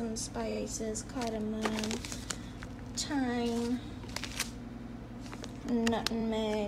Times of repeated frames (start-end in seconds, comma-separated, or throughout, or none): 0.50-0.59, 4.69-4.97, 6.20-6.22